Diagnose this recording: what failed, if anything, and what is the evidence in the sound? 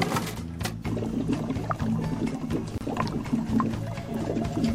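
The failure sits at the codec stage: a gap at a join of encoded pieces. At 2.78 s the sound drops out for about 30 ms, ending at 2.81 s, then carries on exactly where it stopped. Two separately encoded segments were butted together without trimming, so one run's end padding and the next run's start-up delay survive as dead air. A network dropout would lose material or fill the hole with smeared concealment; here nothing is missing, and the softened edges fit codec smearing.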